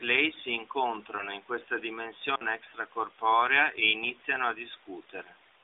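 Between 1.16 and 1.34 s there is a lost AMR speech frame. The speech dips and warbles briefly, which points to a single missing 20 ms frame. After a frame fails its checksum, the decoder fills the gap by reusing the last good pitch and vocal tract settings at reduced gain, so the sound smears slightly rather than dropping out. It then returns a little weak and rough before settling, all within the narrow 300 Hz to 3.7 kHz band of the AMR narrowband line.

At 2.35 s an intermittent contact fault opens the signal path for about 55 ms, until 2.42 s. This is a momentary break in a cable or plug connection: the audio cuts out abruptly with a crackle at the start and end of the gap. While the contact is open, only a faint hiss remains. The short, sharp-edged break separates it audibly from the softer, smeared repair of the lost frame earlier in the clip.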